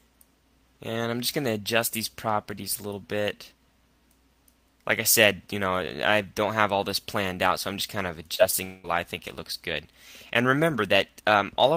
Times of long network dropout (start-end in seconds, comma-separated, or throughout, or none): 8.64-8.86